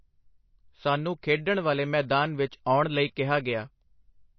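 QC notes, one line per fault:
Throughout: likely MP3 compression. The speech has nothing above 6 kHz and a plainly audible watery swirl. A bit-starved encoder cut the treble at a fixed point and let weak frequency lines flicker between frames, which fits a bitrate near 27 kbps.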